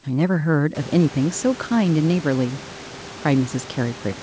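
Speech with no technical faults; room noise comes up by about 24 dB at roughly half a second and stays about 19 dB below the voice, and the call codec band-limits everything to 8 kHz, consistent with G.722.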